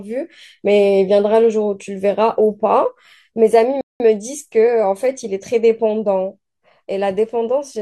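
At 3.81 s the speech drops into a rebuffering stall: the player ran dry of downloaded audio and paused until more arrived, resuming at 4.00 s precisely where it left off. The 0.19 s silence shows as a flat waveform gap and a blank spectrogram column.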